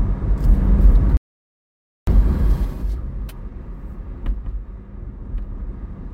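At 1.17 s the sound drops into a playback stall lasting about 0.9 s, to 2.07 s, likely a starved buffer; the waveform flatlines and the spectrogram shows a blank gap.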